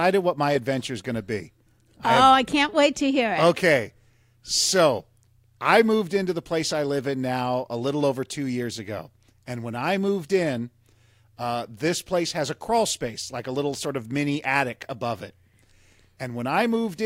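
No technical faults can be heard anywhere in this speech recording.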